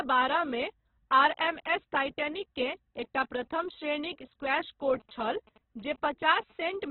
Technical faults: Opus compression; GSM signalling bursts

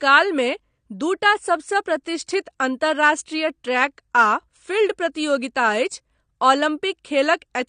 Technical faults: AAC compression

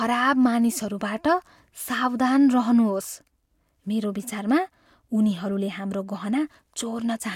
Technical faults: none

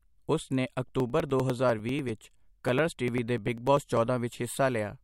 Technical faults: periodic USB or driver dropouts

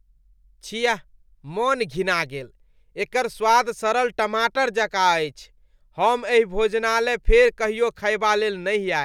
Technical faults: none

